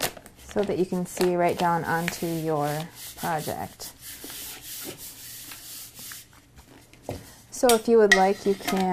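Nothing goes wrong anywhere in the audio, so there's no fault to point out.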